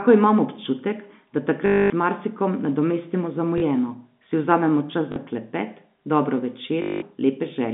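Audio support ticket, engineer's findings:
Packet loss with last packet repeated: robotic stutter and buzz at 1.66–1.90 s (after "imam občutek da", before "z marsikom nadomestimo"), 3.58–3.62 s, 5.12–5.16 s, 6.82–7.02 s. Jitter buffer/PLC replays the last frame. Buzz near 50 Hz suggests 20 ms packets. Repeated sound rather than silence, so not a plain dropout.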